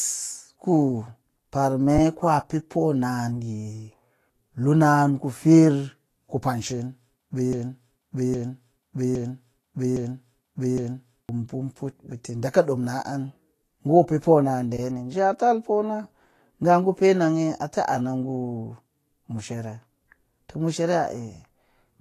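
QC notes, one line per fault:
Throughout: Vorbis compression. Nothing is present above about 14.2 kHz, and the treble is hissy and grainy, with roughened tones and smeared consonant attacks. This is likely lossy Vorbis coding at a low rate, consistent with roughly 34 kbps, where coarse high-band quantisation replaces fine detail with noise.
7.53–11.29 s: broken-record loop. A 0.81 s fragment repeats exactly, back to back, five times, and the speech that should have occupied that span is missing. The likely cause is a stalled player, encoder or stream that kept resending the last fragment it held.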